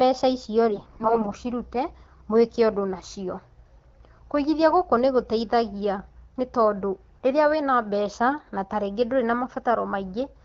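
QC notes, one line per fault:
0.70–1.34 s, AMR bit errors: heavy corruption of the less protected bits misplaces the excitation pulses and skews pitch, gain and spectral values, so the sound keeps its level and pitch but turns hoarse and gargly. The spectrogram shows smeared, noisy harmonics, and the waveform's envelope stays intact.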